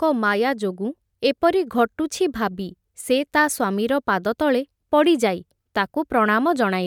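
No technical faults are audible.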